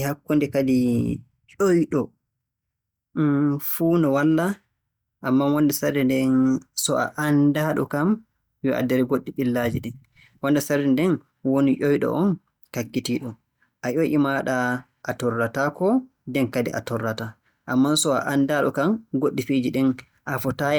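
Speech recording, with nothing technically wrong with it.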